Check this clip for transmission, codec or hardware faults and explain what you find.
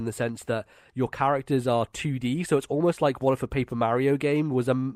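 Nothing to flag here as far as the ear can tell; the speech comes through without any fault worth pointing out.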